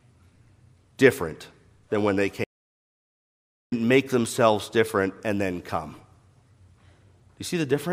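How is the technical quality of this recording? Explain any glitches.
The recording has one clear glitch, a playback stall. At 2.44 s, right after "different than when they", the speech cuts off mid-flow and the output goes completely silent for about 1.28 s. It resumes at 3.72 s with "make themselves different and". The likely cause is the player running out of buffered data or its thread being blocked. On a waveform this shows as a flat line. On a spectrogram it is a blank vertical band with sharp edges on both sides.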